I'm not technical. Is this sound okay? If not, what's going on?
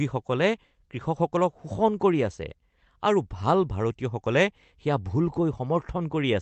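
Yes, the speech came through an ordinary internet call connection with nothing going wrong, and the slightly muffled top end, with the highest frequencies stopping at around 8 kHz, is simply how that kind of call normally sounds.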